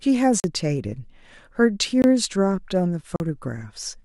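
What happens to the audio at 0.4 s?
At 0.40 s the speech drops into a short, hard hole: it cuts out, 40 ms of dead quiet, then it snaps back at 0.44 s. This is a block of digital silence, where a run of samples was written as zeros instead of audio, most likely because the output buffer wasn't filled in time. With no fade at either edge, the waveform jumps abruptly at both ends of the gap.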